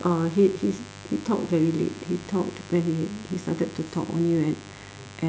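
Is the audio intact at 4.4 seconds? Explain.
No: switching spikes leaking in from the 50 Hz mains, twice per cycle, lay a raspy mains buzz under the speech throughout, including at 4.4 seconds, about 20 dB below it.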